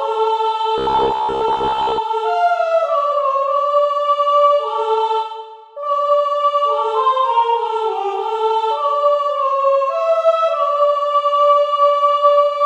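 From 0.78 s to 1.99 s the sound collapses into a robotic sound from repeated short buffers: a stiff, metallic buzz at about 66.7 Hz that still loosely tracks the shape of the audio underneath. The likely cause is input arriving too slowly, so the playback side fills each gap by looping the most recent 15 ms chunk while the real material is dropped. Roughly half of what is heard across that stretch is repetition, and the loop period sets that fixed buzz pitch.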